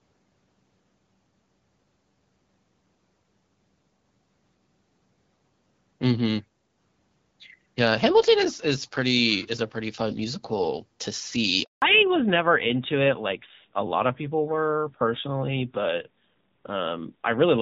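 Speech carried over a mobile call, first as HD Voice with light AMR wideband (HD Voice) codec colouring that fits a rate of about 12.65 kbit/s. At 11.64 s a handover gap silences the sound for 180 ms, until 11.82 s, as the call switches networks and no speech frames arrive. The waveform drops to a flat line, and the spectrogram shows a clean vertical blank across all frequencies. From 11.82 s to the end there is a fallback to narrowband. The call moves to an older codec, and everything above 4 kHz vanishes, leaving a hard horizontal ceiling at 4 kHz on the spectrogram. The speech turns duller and rougher, which points to a low narrowband rate such as AMR-NB at 7.4 kbit/s.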